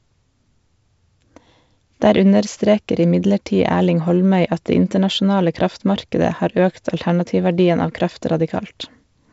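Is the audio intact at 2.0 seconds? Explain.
Yes, the audio at 2.0 seconds is intact, with nothing beyond the normal G.722 wideband telephone coding at 56 kbit/s, which keeps the speech clear up to about 7.7 kHz.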